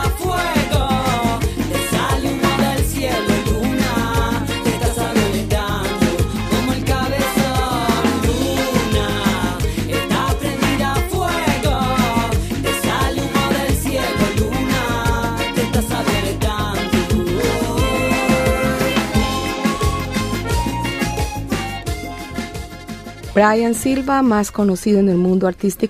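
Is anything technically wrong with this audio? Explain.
No, nothing technically wrong can be heard here; the signal stays steady and intact throughout, with no audible disturbance at any point.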